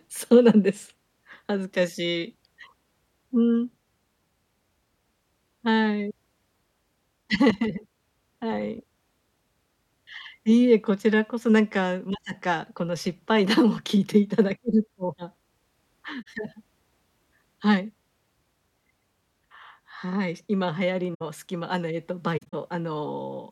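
At 16.22–16.27 s, 21.14–21.22 s and 22.37–22.54 s the speech has corrupt frames concealed: the decoder detected damaged AAC data and filled in, muting each damaged span or covering it with a sign-scrambled copy of the last good spectrum. The spectrogram shows a blurred or empty band.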